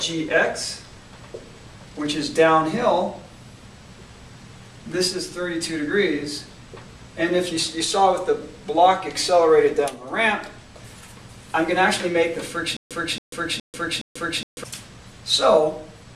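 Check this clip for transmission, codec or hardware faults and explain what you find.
One fault stands out, a stutter with silent gaps from 12.77 to 14.64 s. The same 275 ms burst of sound repeats four times, each followed by about 141 ms of dead digital silence, on a steady 416 ms cycle. The likely cause is a stalled player or stream replaying its last buffered fragment at each retry before running dry, so the audio meant for that stretch never arrives.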